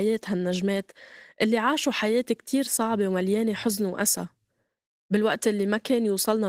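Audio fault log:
throughout: Opus voice compression. The speech is plainly hoarse and slightly robotic, with coarsely rendered excitation. High frequencies are present, suggesting a linear-prediction core below 8 kHz with a sparse transform layer above, coded in 20 ms frames, which fits about 16 kbps.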